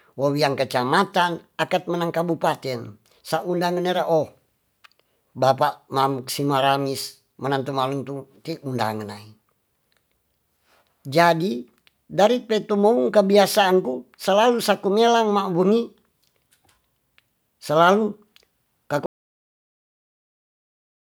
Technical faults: audio dropout to silence

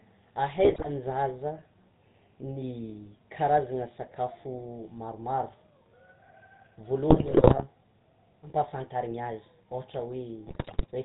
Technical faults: GSM full-rate codec; GSM bit errors

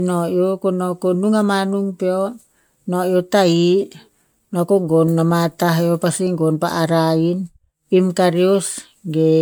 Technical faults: generation loss

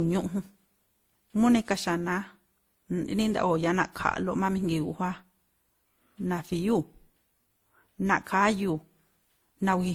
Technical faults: transcoding between lossy codecs

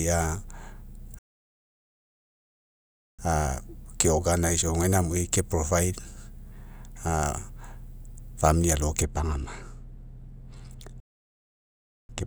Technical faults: playback stall; de-emphasis applied wrongly

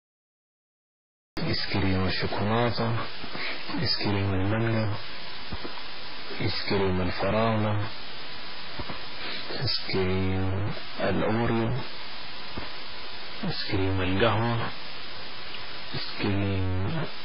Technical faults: stuck bit; MP3 compression; cut-off start

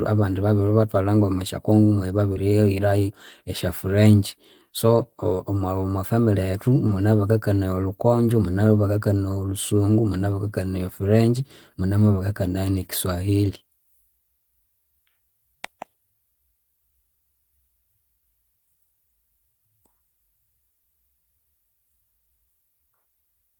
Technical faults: short concealed packet loss; lost packet rebuilt from error correction

